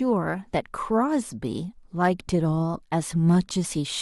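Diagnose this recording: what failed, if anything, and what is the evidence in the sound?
Hard clipping is the failure, and it points to a level overload at the converter or at a fixed-range sample-format stage. Speech peaks at 2.03 to 2.08 s and 3.30 to 3.37 s carry a brief crackly edge. The first is driven about 3 dB past full scale and the second about 1 dB. Those peaks are sliced flat, and the squared-off tops add high harmonics that the speech itself does not contain.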